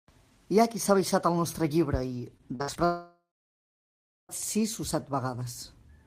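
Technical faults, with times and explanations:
2.37 to 2.77 s, repeated packet loss (robotic sound): right after "el nostre llibre i" the speech breaks up into four short holes, the longest 60 ms and about 140 ms in total, so roughly a third of this 0.4 s stretch is patched rather than real. Each hole is filled by stretching the last received sound, and the next hole follows before the speech can settle, which gives the choppy, robotic quality with pieces missing.
2.85 to 4.31 s, long network dropout: the audio stops carrying new speech for about 1.44 s. The final sound is first drawn out as a fading buzz or hiss, and then roughly 1.04 s of near silence follows before speech returns at "sis o", with the intervening stretch simply gone. This is likely a network interruption long enough that concealment gave up and the missing audio was never delivered.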